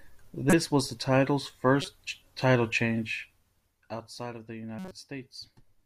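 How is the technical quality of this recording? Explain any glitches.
Three short glitches break into the speech. They are corrupt frames that the decoder played anyway: at 0.50 to 0.53 s, just before "was the title's"; at 1.81 to 1.88 s, right after "was the title's"; and at 4.79 to 4.92 s, after "of the". Damaged bits gave the decoder wrong gains and codes, so energy landed at the wrong frequencies for a few frames. Each one is a short glitch. The first is loudest, the last much fainter. A dropout would go silent instead, and a click would be far shorter and carry no tonal content.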